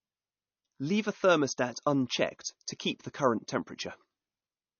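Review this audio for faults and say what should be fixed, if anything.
Throughout the speech, the encoder was likely short of bits, pointing to MP3 compression at around 32 kbps: it discarded everything above 6.6 kHz and zeroed weak frequency lines that flicker between frames, leaving dull, watery, swirling sibilants and smeared consonant attacks. Prevent this by encoding at a higher bitrate or keeping a lossless copy.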